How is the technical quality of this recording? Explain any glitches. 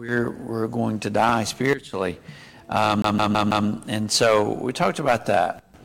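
The recording has two clear glitches: a double pop early on and a skipping stutter later.

From 1.29 to 1.38 s there is a loud pop, two sharp hits in quick succession peaking about 10 dB above the sound. They are likely a voltage step from a plug, switch or static discharge. The sound continues underneath, which sets this apart from a dropout or a skip.

From 3.02 to 3.67 s the CD is stuck on one turn. A scratch throws the laser back at the same spot on each rotation, so a 0.16 s slice plays four times, with a brief mute at every jump. The even, rapid repetition is what distinguishes it from random buffer stutter.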